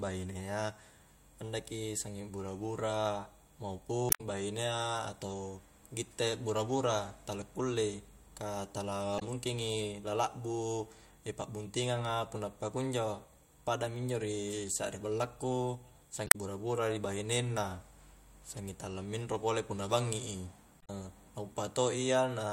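At 4.07 to 4.21 s the speech briefly breaks up. That is damaged data in a compressed stream. Bad bytes reach the decoder, which misreads the frames and hunts for the next header. The same blip returns at 9.16 to 9.22 s, between "kullei ka" and "mungkingi la". It comes again at 16.24 to 16.36 s after "injo ri sakri ballaku", as a brief glitch at 18.57 s before "tala minro", and at 20.78 to 20.90 s.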